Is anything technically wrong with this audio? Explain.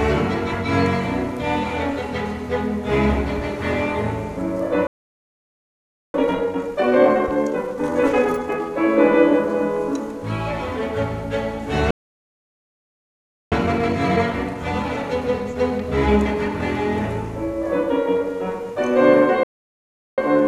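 Yes. The audio stops three times and then rushes to catch up.

Playback stalls occur at 4.87 s, 11.91 s and 19.43 s. The sound cuts out mid-flow and goes silent for about 1.27 s, 1.61 s and 0.74 s respectively. Each gap is followed by the audio resuming. The likely cause is the player running short of buffered data, or its output thread being blocked, so nothing reached the output until it recovered.

Time-compressed catch-up follows each stall. From 6.14 s to 8.68 s the audio runs 1.5 times faster than normal. From 13.52 s to 16.52 s it runs 1.15 times faster. From 20.18 s to the end it runs 1.1 times faster. The player is clearing its backlog by dropping small slices and cross-fading across the joins. Pitch stays normal, but the sound feels hurried.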